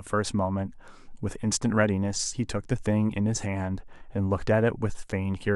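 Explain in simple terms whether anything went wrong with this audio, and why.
Nothing went wrong with this speech recording that a careful listener can pick out. Listening all the way along turns up no moment where the sound stumbles or changes unexpectedly.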